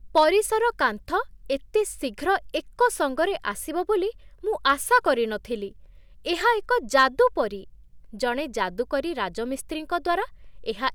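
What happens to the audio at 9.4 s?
Nothing goes wrong at 9.4 s; the speech runs through that moment intact, with no dropout, click or distortion.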